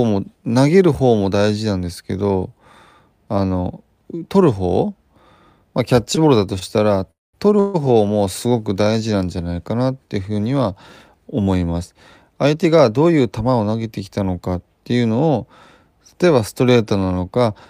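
At 6.59 to 6.63 s there is a short stall from a late packet. The receiver ran out of audio before the next packet came. It stretched the last sound by 22 ms to cover the wait. It then carried on from the same point, so nothing is lost. The speech is just held slightly too long, with a faint buzzy smear.

Two call audio freezes follow, likely from packets held up in the network. The first runs from 7.11 to 7.35 s. The last sound turns into a fading buzz that drops to silence for about 210 ms. In total 224 ms is inserted. The second, at 7.59 to 7.76 s, adds 146 ms. It never goes fully silent, just a decaying buzz. In both, the speech resumes where it stopped.

From 12.45 to 13.75 s there is a jitter buffer speed-up. More audio had piled up than the buffer wants. The receiver trimmed many tiny pitch-period slices in a row, removing around 150 ms. Speech plays at about 110% speed with unchanged pitch. 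It sounds rushed.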